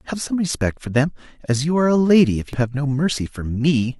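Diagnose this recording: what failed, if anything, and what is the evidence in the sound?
The failure sits in the codec stage: damaged data in a compressed stream. From 2.53 to 2.55 s the speech gives way to a brief glitch. Corrupted frame bytes are misread before the decoder resynchronises, unlike a buffer dropout's clean gap or an analogue click.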